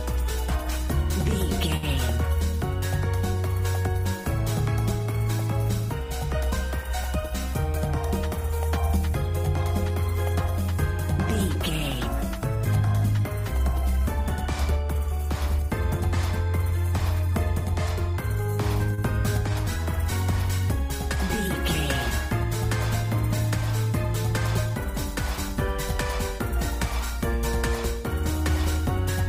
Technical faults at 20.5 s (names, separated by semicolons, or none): none